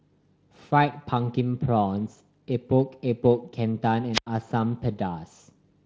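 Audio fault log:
4.13–4.27 s, wireless microphone squelch dropout: the radio link from an analogue FM microphone fades, static swells as the carrier weakens, and the receiver's squelch then shuts the output for about 87 ms before the signal recovers and the sound returns. The rising hiss just before the silence separates it from a digital packet gap, which cuts in cleanly; the Speex coding heard across the speech leaves only light codec texture around it.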